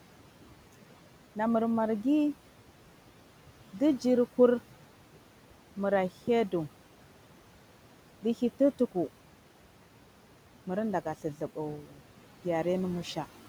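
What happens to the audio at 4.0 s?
At 4.0 s, as across the whole clip, a noise suppressor is working frame by frame, pulling down each frequency band it judges to be steady noise. In the gaps between words the room noise, which sits about 20 dB below the speech, is cut by about 12 dB, then returns under the speech as the suppressor eases off. These noise suppressor artifacts make the background pump, dropping in pauses and rising with each phrase.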